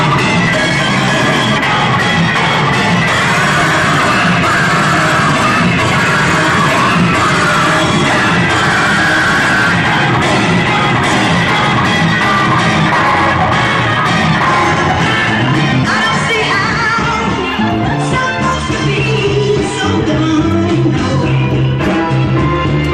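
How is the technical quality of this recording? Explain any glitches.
There's one glitch: from 3.61 to 3.71 s, DAB burbling. Bit errors at roughly 0.3% slipped past error correction, putting short blips of noise into sub-bands across five frames, a brief patch of noisy blips.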